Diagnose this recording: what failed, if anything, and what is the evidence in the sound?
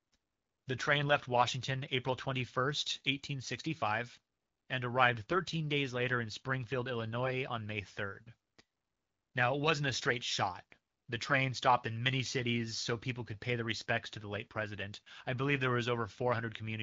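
AMR bit errors at the network stage: from 11.26 to 11.35 s, just before "stopped in many cities", the speech turns briefly hoarse and gargly while pitch and level hold. Corrupted unprotected AMR-WB bits at a few percent misplace excitation pulses and skew gain and spectral values across several frames.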